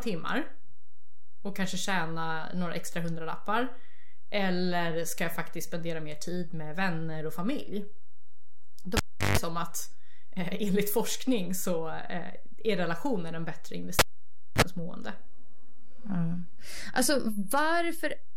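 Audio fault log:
throughout: DC offset. The waveform sits shifted off the zero line by about -28 dBFS for the whole clip. It makes no audible tone of its own, so it differs from hum: it is a constant pressure at 0 Hz, not a 50 Hz buzz with harmonics. It eats into headroom on one side and shows as a steady bar at the very bottom of the spectrum. It can also make edits and cuts in the speech start with a click.
8.97–9.38 s and 13.99–14.62 s: cable pulled and plugged in. Each event opens with a pop as the live connector breaks, and the sound drops to near silence for about 357 ms and then about 582 ms. A burst of 50 Hz mains buzz follows while only the plug tip makes contact, lasting 147 ms the first time and just 36 ms the second. A second pop marks full reconnection. The second event comes right after "är relationer en bättre". A plain dropout is only a gap, and the pop-buzz-pop sequence is what separates these from one.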